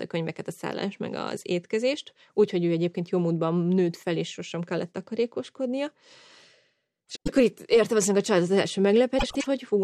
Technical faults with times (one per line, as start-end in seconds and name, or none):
7.09-7.29 frames out of order
9.19-9.46 frames out of order